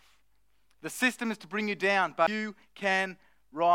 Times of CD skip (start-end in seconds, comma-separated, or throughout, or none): 2.27